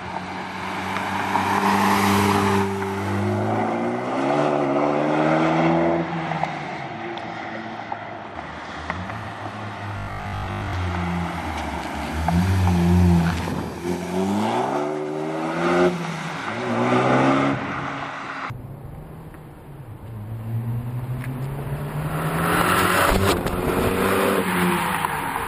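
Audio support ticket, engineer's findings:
Robotic sound from repeated short buffers, 9.97 to 10.73 s. Rigid metallic buzz at 50 Hz, matching a 20 ms repeat. Likely cause: buffer underrun in playback or network path, concealment looping the last block, so most of the real audio is skipped.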